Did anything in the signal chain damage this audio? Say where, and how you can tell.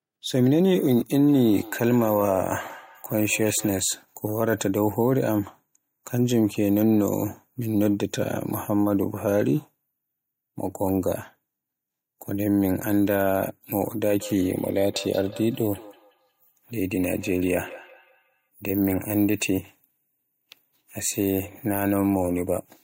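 Yes: feedback echo between two devices in call processing, 1.11–3.8 s and 14.06–18.49 s, repeats roughly every fifth of a second, thinning and ringing, peaking about 17 dB below speech.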